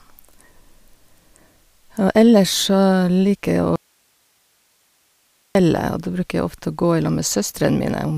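At 3.76 s the speech cuts off abruptly and stays gone until 5.55 s, an audio dropout to a faint residue lasting about 1.79 s. The gap holds only a low hiss, roughly 45 dB below the speech level, and the speech returns just as suddenly. The likely cause is a brief loss of the signal feed while the downstream path stayed live, so its noise floor carried through the break instead of true silence.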